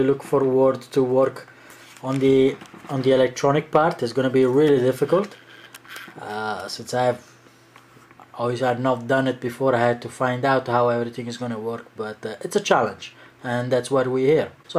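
No technical faults are audible.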